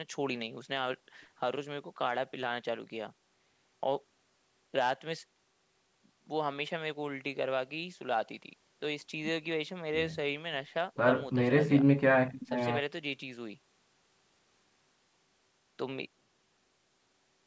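Nothing goes wrong anywhere in this bit of speech; it simply carries the usual signs of a call microphone path, with the deepest bass trimmed away and nothing above about 8 kHz.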